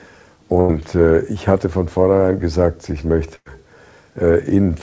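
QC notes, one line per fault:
0.60–0.71 s and 3.36–3.48 s, burst of packet loss: a run of consecutive packets is lost. The receiver fills each gap by extending the last sound and fading it, for about 89 ms and 99 ms, so you hear a held buzz or a fading hiss. Playback then picks up further on, skipping about 80 ms and 100 ms of audio. Both gaps sit within audio already limited to 8 kHz, which fits a G.722 call path.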